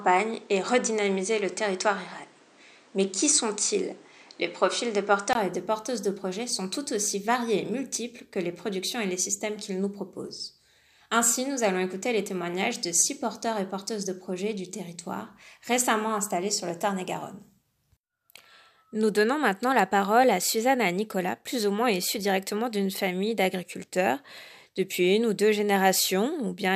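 For the first 5.35 s the audio sounds duller and boxy, with nothing above 9.9 kHz, a different background hiss sitting roughly 35 dB below the signal, and a level a few dB off from what follows. At 5.35 s a 20 ms silence marks the change to fuller sound. This is likely an input switched to a poorer device. On a spectrogram the top of the band is cut off flat until 5.35 s, and the waveform shows a brief dropout and a step in amplitude there.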